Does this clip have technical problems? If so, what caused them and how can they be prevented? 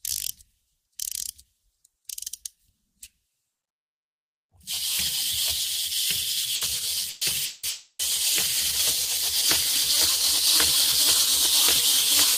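Yes. There are two bursts of packet loss, at 6.55 to 6.64 s and 7.09 to 7.24 s. Packets went missing, and the receiver stretched the last bit of sound into a fading buzz or hiss for about 60 ms and 120 ms. Playback then picks up with that much audio skipped. A bigger jitter buffer plus forward error correction would cover these short bursts.

Right after that, at 7.45 to 7.66 s and again at 7.69 to 8.02 s, the same fading fill runs much longer, about 180 ms and 300 ms. The second one ends in roughly 70 ms of silence before the sound comes back with the gap cut out. The likely cause is a long network dropout. A steadier connection, such as wired instead of congested Wi-Fi, or prioritising the audio traffic, would help prevent these.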